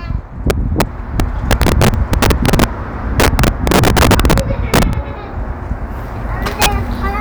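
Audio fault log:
0.5–0.82 s, 1.2–2.64 s, 3.2–4.83 s, 6.62–6.66 s, integer overflow: peaks driven about 3 to 11 dB past full scale wrap to the opposite sign, giving violent cracks far harsher than clipping's flattened buzz.
1.94 s, 4.93 s, audio missing between chunks: a few milliseconds vanish and the edges butt together without silence, a skip rather than a gap, likely from chunk handovers every 3 s.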